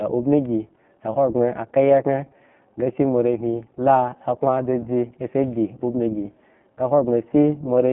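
Speech runs through the iLBC codec for its whole length, with plainly audible damage. Each short frame, which fits a 20 ms frame size in the 15.2 kbps mode, is coded on its own, giving a rough, synthetic edge. A spectrogram shows energy confined to roughly 150 Hz–3.4 kHz, with nothing above 3.8 kHz.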